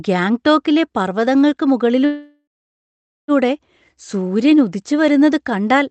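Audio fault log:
2.05–3.31 s, call audio freeze: the speech stops and the last sound is stretched into a fading buzz that drops to silence for about 0.83 s, then resumes where it left off with nothing lost, likely a stalled jitter buffer concealing late packets and adding about 1.23 s of delay.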